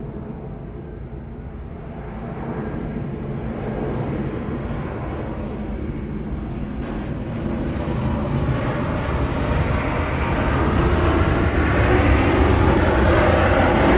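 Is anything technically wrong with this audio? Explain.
Yes, there are two faults in this sound, which comes through a G.711 mu-law call path with nothing above 4 kHz.

Skip ahead, 6.82–6.84 s: roughly 0.7 s of audio was dropped while later audio waited, so playback jumps forward with no gap filling the join.

Jitter buffer speed-up, 7.13–8.61 s: the overfilled buffer repeatedly trimmed pitch-period slices, about 0.3 s in total, so the sound runs at 117% speed, hurried but unchanged in pitch.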